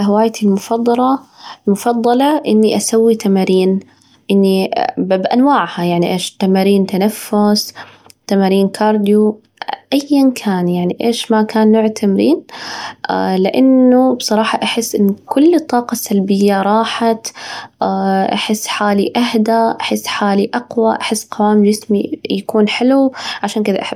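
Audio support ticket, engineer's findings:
Listened through the full speech clip and nothing stood out; no findings to log against any component.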